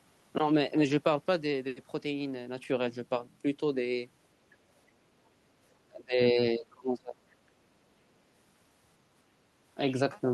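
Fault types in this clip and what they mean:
Speech suppressed in double talk: between 5.78 and 7.37 s speech drops by about 30 dB in pieces, likely echo-canceller gating; waveform shows gaps, spectrogram blank bands.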